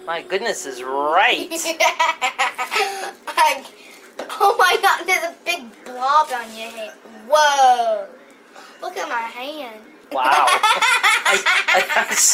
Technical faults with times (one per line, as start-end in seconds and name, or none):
none